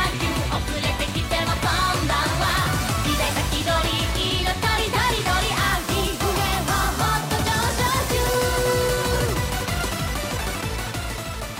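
No technical faults can be heard in this recording.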